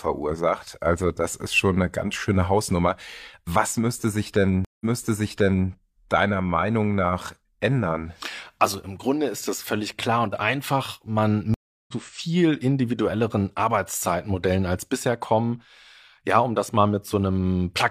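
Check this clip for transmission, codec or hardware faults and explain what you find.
Two stream reconnects interrupt this speech clip.

Stream reconnect, 4.65 to 5.69 s, just after "müsste sich": the connection dropped, the player fell silent for about 159 ms, then reconnected and started a fresh decoder mid-stream. The server resent a burst, so playback resumes 0.88 s earlier and that stretch is heard twice, fading back in.

Stream reconnect, 11.54 to 11.94 s, just before "viel individuelleren": a 341 ms gap, after which the audio resumes roughly 0.4 s later, so that portion is lost.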